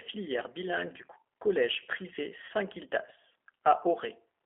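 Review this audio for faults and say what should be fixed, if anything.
G.729 codec, throughout the clip. The speech is confined to a narrow telephone band of roughly 300 Hz to 3.4 kHz, with no content above that, and the voice has a rough, synthetic edge. That edge comes from the decoder rebuilding each 10 ms frame from a vocal tract filter, a pitch predictor and a handful of pulses rather than the actual waveform. The damage is plainly audible, which fits an 8 kbit/s G.729A stream. Carrying the call on a wideband codec such as G.722 or Opus would remove this band limit and coarseness.

VoIP packet loss concealed by the speech codec, from 2.45 to 2.51 s, just after "bilingue du collège privé". About 40 ms of audio is missing, which fits two lost packets. The decoder filled the gap by extending its last pitch and filter state at falling gain, so the sound smears into a buzzy tone or coloured noise that fades, and the voice stays weakened briefly after real packets resume. 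A jitter buffer with forward error correction or redundant packets, on a network with less loss, would prevent this.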